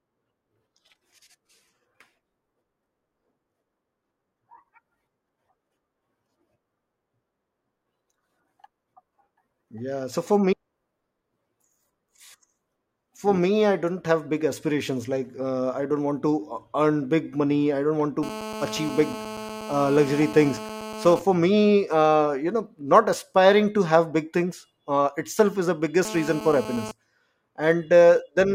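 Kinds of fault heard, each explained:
GSM phone buzz: a nearby 2G phone's 217 Hz transmit bursts, rectified into a raspy buzz about 13 dB below the speech; spectrograms show dense harmonic stacks.
GSM signalling bursts: sparser burst groups while the phone's user is silent, heard as faint even ticks with a longer buzz twice a second; the waveform shows short repeating spike clusters.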